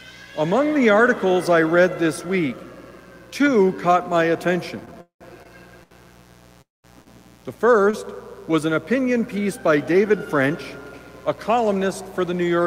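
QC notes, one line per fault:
Throughout: mains buzz. A steady, raspy buzz sits about 25 dB below the audio for the whole clip. It is built on a 60 Hz mains hum. Sharp switching spikes repeat twice per cycle, so the harmonics climb well up into the kilohertz range. That is why it rasps rather than hums. Its source is something like a dimmer, a rectifier or an unshielded line coupling into the signal path.
4.85 to 5.47 s: repeated stalls (stutter). The audio catches five times in about 0.6 s. Each time, the last sound is held and then carries on. About 258 ms is filled this way, 42 percent of the span. The longest hold is 196 ms, and it fades as it waits. Nothing is lost. Packets kept arriving late, and the jitter buffer kept running dry, so the sound drags and stutters.
5.83 to 6.06 s, 7.02 to 7.08 s and 7.90 to 7.95 s: short stall from a late packet. Each time, a sound hangs on too long, with a slight buzz or dip, and then resumes where it stopped. 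The holds last 77 ms, 37 ms and 23 ms. One packet was missing when it was due each time. The buffer emptied, and the receiver stretched the last sound until the packet came. No audio is missing. The first stall leaves the playback about 6 ms later.
6.62 to 6.86 s: call audio freeze. The sound stops and is briefly continued as a fading buzz or hiss. It then drops to silence for about 190 ms before resuming exactly where it left off. About 224 ms of gap is inserted in total, and nothing is skipped. The likely cause is packets held up in transit, which drained the jitter buffer. The receiver could only extend and fade the last sound until the stream returned.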